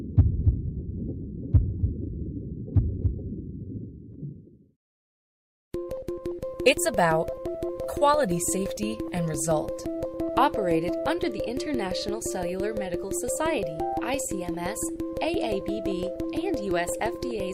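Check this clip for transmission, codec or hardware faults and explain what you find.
One transmission fault is present. From 0.32 to 1.99 s the audio turns rough, watery and dull, holding at its worst for about 1.6 s. This is a call bitrate drop, consistent with the encoder falling from around 128 kbps to 25 kbps, coding coarsely and trimming high frequencies.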